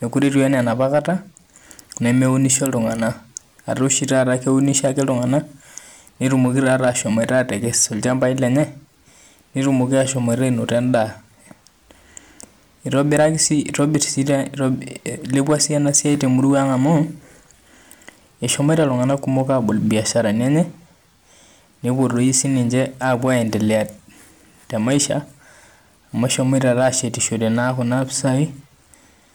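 Speech with hard clipping throughout. The level is pushed about 6 dB past what the chain can pass. A small share of samples, under one percent, get flattened, so the loudest peaks crackle.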